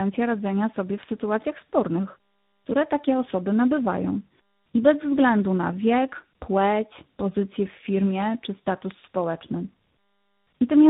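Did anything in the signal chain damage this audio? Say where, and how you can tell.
Yes, tandem speech coding at the codec stage. It is rough and warbly throughout, with nothing above 3.8 kHz. That fits G.729A output re-encoded through G.711 into G.726.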